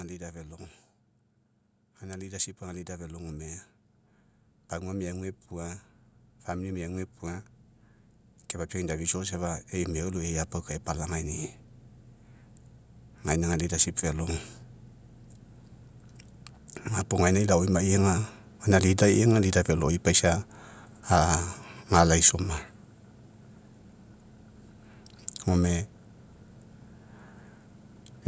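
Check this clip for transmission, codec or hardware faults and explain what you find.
One fault stands out, an automatic gain rising event in the call chain. From 8.72 to 11.57 s the automatic gain control judged the input too quiet and slowly raised its gain by about 5 dB, so the speech and the background noise swell together over nearly three seconds. The call's microphone processing, which leaves nothing above 8 kHz, is working normally.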